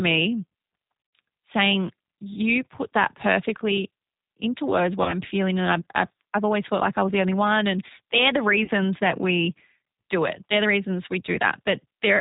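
Speech runs through the G.729 codec for the whole clip, and the damage is plainly audible. Nothing above 4 kHz survives. Each 10 ms frame is rebuilt from a vocal-tract filter, a pitch predictor and a few pulses, which gives the voice a rough, slightly synthetic grain at an 8 kbit/s rate. A simple band limit would leave the remaining band clean, so this grain is what marks it as a model-based codec. VoIP packet loss concealed by the speech codec also occurs three times. From 0.97 to 1.13 s, roughly 120 ms of audio is missing, scattered over 160 ms, with the longest gap about 60 ms. Shorter losses of about 40 ms fall at 5.03 to 5.19 s and 8.64 to 8.70 s. In each, the decoder stretches the last pitch and filter into a buzzy tone or coloured noise that fades instead of falling silent. The voice then stays weak for a moment after the audio returns, and that lingering weakness sets it apart from a hard dropout or a gated gap.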